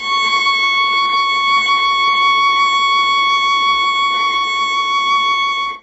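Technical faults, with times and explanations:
Throughout: HE-AAC compression. The music has nothing above 7.6 kHz, and the heavy, gritty coarseness points to a very starved bitrate, consistent with roughly 8 kbps. The likely cause is an HE-AAC encoder coding only the lower spectrum and synthesising the upper bands by spectral band replication, which transposes lower content upward under a coarse envelope. At this damage level the treble that remains is reconstructed rather than original, so its texture does not match the source.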